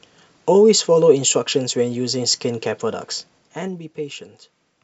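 A speech clip with zipper noise from 3.14 to 3.88 s, where the level drops by roughly 10 dB in audible 2 dB jumps at about ten steps a second. Each jump lands as a small click, so a rapid ticking rides on the speech while the level falls. That ticking is the giveaway: a smooth level change glides without clicks because the gain is interpolated rather than switched in coarse increments.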